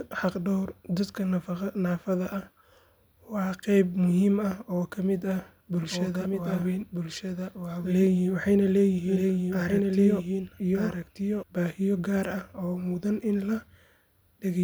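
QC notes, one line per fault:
5.77–11.43 s, doubled audio track: the speech is likely being captured a second time through a slower path and mixed back in, so a full-band copy runs about one and a half seconds behind the original at roughly 5 dB lower. The late copy carries no decay or room colouring, so it sounds like a second overlapping delivery of the same speech rather than an echo, and it cuts in and out abruptly at both ends of the range.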